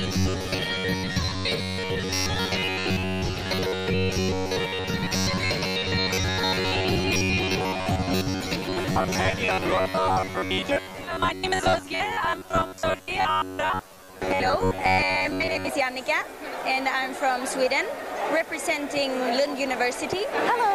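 From 0.01 s to 15.69 s the audio has robotic sound from repeated short buffers: a rigid, metallic buzz fixed at 93.8 Hz that follows the sound's contour only loosely. The likely cause is new audio arriving too seldom, so the playback path loops a fragment of about 10.7 ms, one period of that buzz, to fill the gaps. Most of that stretch, roughly two thirds or more, is repeated material, with the real audio in those gaps skipped.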